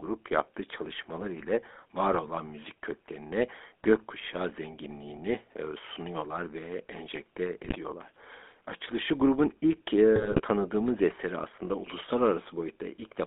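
The speech here has been passed through the GSM full-rate codec at 13 kbps, which rebuilds the voice from a vocal-tract model excited by sparse, regularly spaced pulses, with the line band running from about 250 Hz to 3.6 kHz. The coarse excitation leaves the voice plainly buzzy and gravelly across the whole clip, while the band limits strip away low body and the top end above 3.6 kHz. On top of that come GSM bit errors, where corrupted bits reach the decoder and scramble its filter, pitch and gain values for individual frames. The result is brief squawks, pops and gargling. The first burst falls at 1.40–1.45 s, between "yaptığı çalışmalar" and "var olan müzik köklerine", short enough to fit a couple of 20 ms frames. A harsher burst at 7.62–7.77 s follows "sunuyorlar ve enjekte", and the longest, at 10.16–10.42 s, sits between "grubun ilk" and "tanıdığımız eseri aslında".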